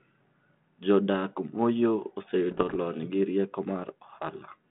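From 2.51 to 2.77 s, just before "lony gi rieko", bit errors on an ADPCM link cause pops and rough bursts. Each flipped bit upsets the decoder's step size and predictor, so the damage rings on briefly.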